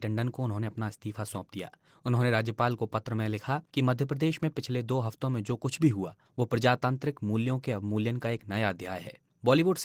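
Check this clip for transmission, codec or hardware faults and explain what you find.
One fault is present across the whole clip: Opus voice compression. From start to finish the speech sounds hoarse and slightly robotic, with a coarse, grainy edge, yet the upper range is not cut away. That fits hybrid coding at a low rate, likely around 16 kbps: a linear-prediction coder rebuilds the band below 8 kHz with a roughly quantised excitation, and a thin transform layer supplies the highs. A plain bandwidth limit would sound dull but clean. This damage instead sounds rough and synthetic.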